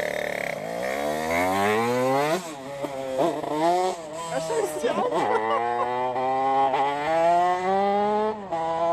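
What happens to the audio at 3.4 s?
At 3.42 s there is damaged data in a compressed stream: a stretch of the encoded bytes is wrong, so the decoder misreads the frame there, loses sync and hunts for the next valid header. You hear a brief glitch, a chirp, squawk, click or short hole.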